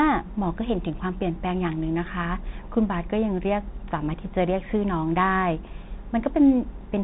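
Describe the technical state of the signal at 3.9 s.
Bluetooth CVSD headset codec throughout, including 3.9 s: one-bit up-or-down coding with an adaptive step removes everything above 3.8 kHz, leaving scratchy s sounds and granular hiss.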